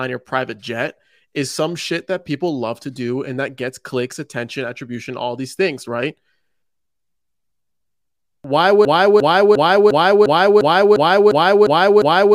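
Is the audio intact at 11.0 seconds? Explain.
No. At 11.0 s you're inside a broken-record loop running from 8.85 s to the end. A 0.35 s piece of speech repeats back to back, ten times, likely because the player, encoder or stream stalled and kept resending its last fragment. The real audio there is gone.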